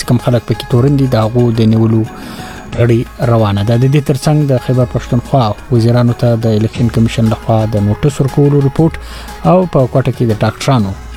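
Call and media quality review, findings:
AAC frame loss with concealment at 2.75–2.81 s and 6.75–6.81 s: each gap fits one dropped frame of about 43 ms. The decoder rebuilds it from the prior spectrum, leaving a brief smeared, phasey patch.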